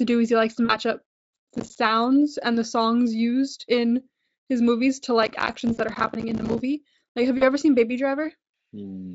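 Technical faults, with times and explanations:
0.65–0.76 s, 5.73–5.78 s and 7.37–7.44 s, VoIP packet loss concealed by the speech codec: after "is he likes to", and just before "ever seen", about 40 ms of audio went missing each time, which fits two 20 ms frames. The decoder extrapolated from its last pitch and filter at falling gain, so the sound smears into a buzzy tone or coloured noise that fades. It stays weak briefly afterward.
1.05–1.78 s and 5.23–6.61 s, processor overload crackle: the second run begins after "in his movies to". The processor repeatedly missed deadlines for short buffers, which points to buffers of roughly 5 ms. Dozens of missed buffers each left a hard-edged silent gap, and together these produce a gritty crackle riding on the audio until the load eased.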